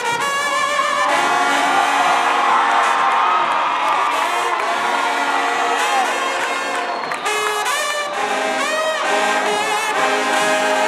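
Nothing is technically wrong with this audio, and no faults can be heard anywhere in it.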